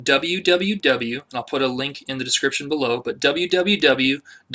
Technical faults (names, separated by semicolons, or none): resampler restarted on every block